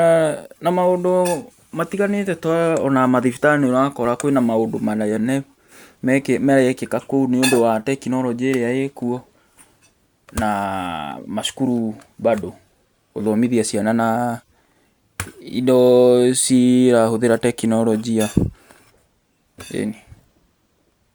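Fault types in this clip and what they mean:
Nothing to flag here; I listened all the way through this speech recording and didn't hear any technical faults at all.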